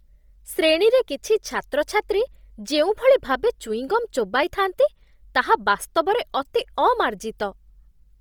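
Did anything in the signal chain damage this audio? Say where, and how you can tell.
Yes. The damage is at the codec stage and runs through the whole speech clip. The upper spectrum sounds hollowed out and refilled with a hiss-like texture, so the speech has a breathy, grainy edge. Content still reaches about 20.2 kHz, so the band is not cut. The cause is likely Bluetooth LC3 compression. At a heavy setting it drops upper bins and substitutes noise. The damage fits 10 ms frames and a low bitrate near 32 kbps.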